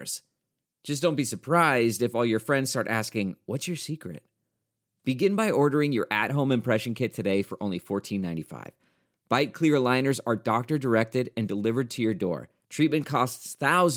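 No technical faults occur at any point in the recording, so there is nothing to describe in time order.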